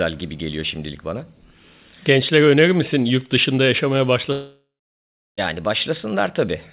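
At 4.32 s, just after "misin yurt dışında yaşamaya", the speech turns into a fading buzz, then about 0.7 s of silence until 5.39 s, resuming with roughly 1.1 s lost. This is likely a long network dropout, with the receiver concealing the gap before falling quiet.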